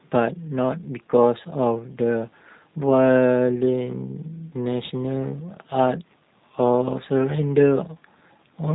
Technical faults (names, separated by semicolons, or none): G.729 codec